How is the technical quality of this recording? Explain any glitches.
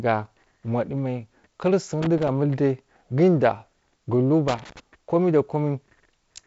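The speech carries two short bursts of loose connector crackle. It comes through wideband telephone-style coding with nothing above 7.7 kHz, which fits G.722 at 48 kbit/s.

At 2.02–2.28 s, and again at 4.48–4.80 s just before "komai da", a worn contact makes and breaks rapidly. This chops the signal into irregular scratchy crackle, unlike the single clean click of a digital edit.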